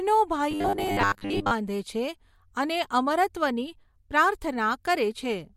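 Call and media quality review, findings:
Robotic sound from repeated short buffers, 0.51 to 1.52 s. Speech becomes a rigid metallic buzz at 100 Hz, which fits a 10 ms buffer being replayed. Likely an underrunning jitter buffer or concealment repeating audio across most of the stretch. Spectrogram shows flat evenly spaced harmonics; the waveform shows identical repeating cycles.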